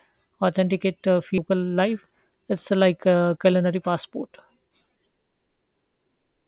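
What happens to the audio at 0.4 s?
Nothing goes wrong at 0.4 s: the speech there comes through intact, with the narrow, telephone-like band of a G.711 call path, which passes nothing above 4 kHz.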